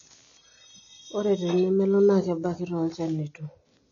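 From start to finish the speech sounds dull and smeared, with nothing above about 6.9 kHz and a fizzy, warbling texture on sibilants and held sounds. That points to AAC compression, likely AAC-LC at a low bitrate around 24 kbps. The encoder lowers its cut-off and starves bands of detail, so the damage is plainly audible. A simple low-pass filter would dull the top end cleanly, but here the remaining spectrum itself shimmers and swirls.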